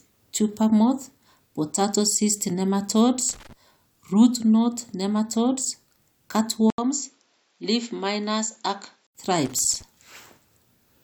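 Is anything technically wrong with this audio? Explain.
Yes, there are two problems. First, loose connector crackle shows up twice: from 3.29 to 3.53 s, right after "moth potato cyst nematodes," and again from 9.45 to 9.82 s. A worn or dirty contact somewhere in the chain is flickering between connected and open, chopping the signal on and off. You hear it as short, ragged bursts of scratchy crackle over the speech.

Then at 6.70 s the sound drops out for about 80 ms and comes back duller and a bit quieter, roughly 5 dB down, with nothing above 7.6 kHz and new background noise sitting around 45 dB under the speech. That's most likely the input switched to a poorer device, such as a different mic or a headset in call mode, with its own narrower band, tone and noise. The fuller sound returns at 9.15 s.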